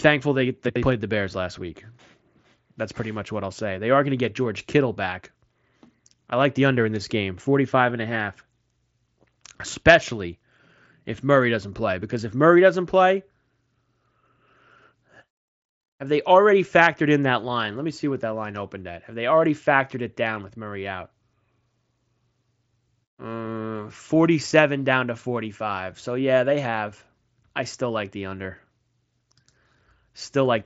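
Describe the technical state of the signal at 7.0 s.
At 7.0 s the audio is intact, with no fault at that moment; it passes through the Bluetooth mSBC headset codec as expected, with nothing above about 7.7 kHz.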